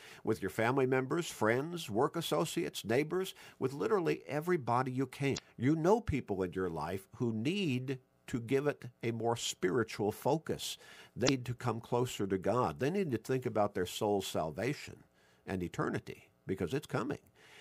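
At 5.35 to 5.39 s and again at 11.25 to 11.29 s there's damaged data in the compressed stream: the decoder trips over bad frames and puts out a short glitch, heard as a chirp, squawk, click or brief hole.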